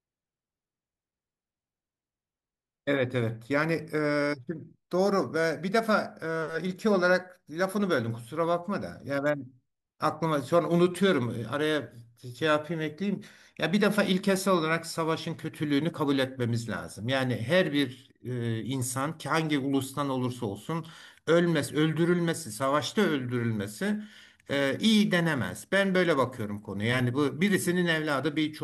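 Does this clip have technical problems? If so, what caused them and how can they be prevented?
No, there's nothing technically wrong to hear in this speech clip, so there's nothing here that needs preventing.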